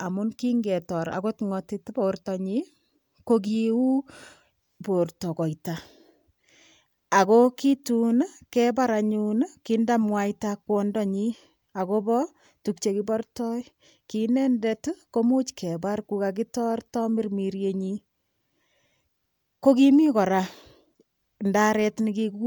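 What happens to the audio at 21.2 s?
Nothing goes wrong at 21.2 s: the speech carries on intact through that moment, with no dropout, glitch or other fault.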